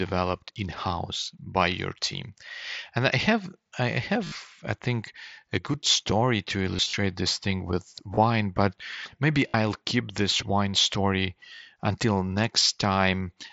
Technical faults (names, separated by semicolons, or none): concealed Bluetooth headset packet loss